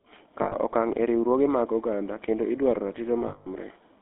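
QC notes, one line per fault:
throughout: GSM full-rate codec. The speech passed through the original GSM coder, which rebuilds the vocal tract as a filter and drives it from a coarse, decimated pulse excitation. The sound fits a 13 kbps full-rate stream. Because so much of the excitation detail is discarded, the speech carries a plainly audible buzzy, gravelly roughness. The line band runs only from about 250 Hz to 3.6 kHz, so the sound is thin and muffled.
0.42–0.56 s and 3.28–3.48 s: lost GSM frames. The decoder received bad frames and, having nothing new, reused the last good frame's parameters. The first gap lasts 100 ms. The second lasts 180 ms and follows "mag oganda kendo idwaro". In both, the preceding sound smears into a rough, metallic ringing hold before normal speech resumes.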